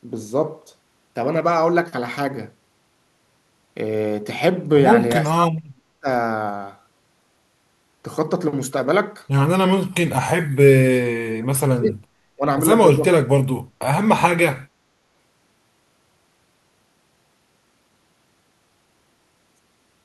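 The speech drops sharply between 5.21 and 6.08 s, again from 10.75 to 12.09 s, briefly at 12.35 to 12.43 s, and from 12.98 to 13.49 s. At its deepest the level falls by roughly 40 dB, and by about 25 dB in the short 12.35 s dip, so the talker fades or cuts out in pieces. This is speech suppressed in double talk, likely an echo canceller attenuating the near-end talker while the far end was also speaking.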